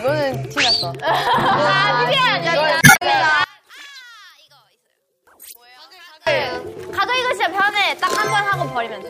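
From 2.78 to 3.02 s, damaged data in the compressed stream makes the decoder misread frames and hunt for the next valid header. The result is a short blip that also stretches the passage by about 66 ms. From 3.44 to 6.27 s, the sound drops by about 25 dB, with centred content almost gone. This is likely one channel inverted, so the shared material cancels on mono summing and only the inter-channel difference remains. Within that stretch, a second burst of stream damage at 5.51 to 5.56 s produces another brief decoder glitch.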